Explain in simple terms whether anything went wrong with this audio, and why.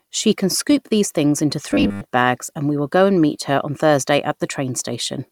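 From 1.71 to 2.02 s, robotic sound from repeated short buffers: a rigid 100 Hz buzz, likely from a 10 ms chunk replayed over missing audio.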